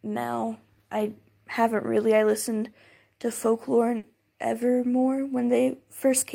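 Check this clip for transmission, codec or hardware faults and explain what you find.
There's one fault: a burst of packet loss at 3.97 to 4.06 s, where about 60 ms gets concealed by stretching and fading the last sound, then the speech jumps ahead.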